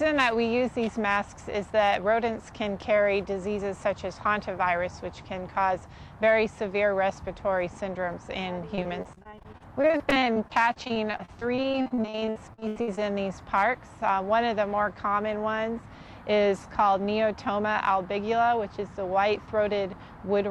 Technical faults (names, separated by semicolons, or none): repeated packet loss (robotic sound)